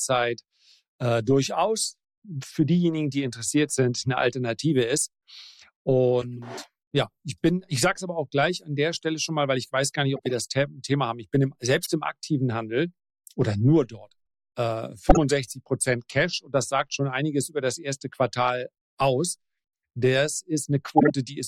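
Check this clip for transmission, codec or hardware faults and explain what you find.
There are five short chirps or noise bursts at 6.21–6.39 s, 10.16–10.33 s, 11.83–11.88 s, 15.09–15.17 s and 20.97–21.11 s. The last two are loudest, peaking near about −5 dBFS. This is corrupt frame decoded: a few damaged compressed frames were played anyway, scattering energy to the wrong frequencies.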